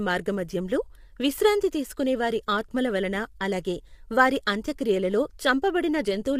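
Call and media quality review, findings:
Speech rough and grainy for the whole clip, noise filling gaps between harmonics, dull or synthetic top band. Likely low-delay AAC compression (AAC-ELD): short frames resolve pitch harmonics poorly; damage plainly audible, consistent with roughly 32 kbps.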